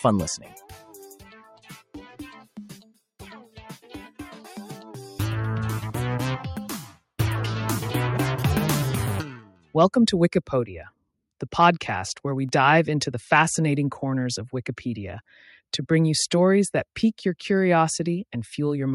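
Across the whole clip the level pumps and flutters, with sustained parts and decays sagging by roughly 5 dB while attacks pass. This is a noise suppressor applied to music or sounds: a speech-tuned suppressor treats steady tones and tails as noise and turns them down.

The sound cut by the noise suppressor is heard as hollow dips from 0.40 to 0.94 s (about 8 dB), 1.15 to 1.70 s (about 11 dB) and 9.41 to 9.75 s (about 13 dB). In each, the suppressor judged the held material to be noise and pulled it down harder than its surroundings.

A tick at 12.49 s and another at 17.02 s mark blocks of digital silence, lasting 0.71 ms and 5.33 ms. The sound dropped out abruptly and returned unfaded. The longer gap fits an unfilled 256-sample buffer.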